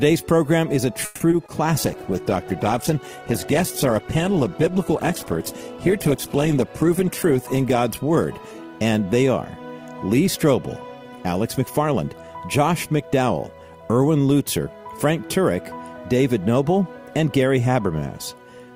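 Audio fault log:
1.05 to 1.22 s, call audio freeze: the sound stalls for about 150 ms, with the last moment drawn out as a fading buzz or hiss, likely because packets were held up and the jitter buffer emptied. Playback then resumes where it stopped, nothing lost, only delayed.
1.30 and 1.46 s, short concealed packet loss: two 20 ms holes where audio never reached the decoder in time. The receiver stretches the preceding sound across each gap and blends back, leaving a brief smear or wobble.
1.79 to 9.52 s, call bitrate drop: the encoder falls from 48 to 11 kbps after the bandwidth estimate collapses, sitting at the lowest rate for about 5.4 s. Coarser coding and lost high frequencies make the sound rough, watery and muffled until recovery.
11.04 to 12.28 s, jitter buffer speed-up: an overfull buffer is drained by cutting out short pitch-period pieces again and again, roughly 150 ms in total. 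Playback runs at about 111% speed with the pitch unchanged, so this stretch sounds hurried.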